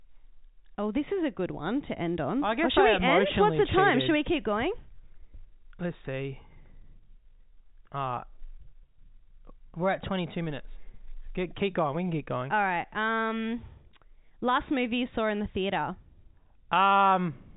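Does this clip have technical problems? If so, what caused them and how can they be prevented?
No, there are no technical problems to point to in this speech. The sound carries the narrow band of G.711 telephone coding, with nothing above about 3.8 kHz, which fits an ordinary 64 kbps mu-law phone line.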